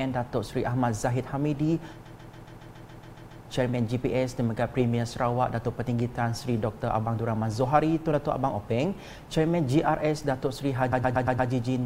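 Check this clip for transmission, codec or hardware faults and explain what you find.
Two stretches of repeated frames were found. From 2.05 to 3.44 s, a 139 ms block loops ten extra times, adding 1.39 s. From 10.92 to 11.50 s, a 116 ms block replays five times, adding 0.58 s. Compressed frames were sent again, so the decoder repeats that audio, heard as a rhythmic stutter. A waveform or spectrogram shows identical tiled segments.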